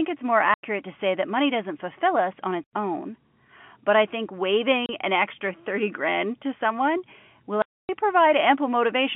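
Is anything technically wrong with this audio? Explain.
Yes. The speech drops out completely four times, each hole opening and closing with a hard edge: about 90 ms at 0.54 s between "it's more" and "to say that money", about 90 ms at 2.64 s after "doesn't fulfill us on", 30 ms at 4.86 s between "but I think" and "an extra", and a long 270 ms gap at 7.62 s. This is packet loss filled with silence. Blocks of audio never arrived, and the receiver inserted digital silence in their place, leaving hard edges. Every gap is a multiple of 30 ms, which points to 30 ms packets lost singly or in runs of three and nine. The narrow telephone band of the G.711 line is audible throughout.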